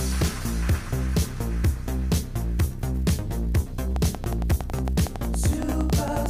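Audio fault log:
3.96–6.27 s: train of clicks, regular ticking at about 10.9 per second, roughly thirty pulses peaking well above the sound, likely interference from nearby equipment.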